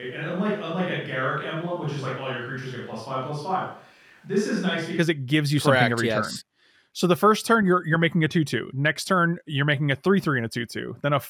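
From the very start until about 4.97 s the speech sounds roomy and hollow, thin in the bass, around 5 dB quieter, with room noise roughly 35 dB below it. That's likely a switch to a distant microphone, snapping back to the close one right at "it gives you".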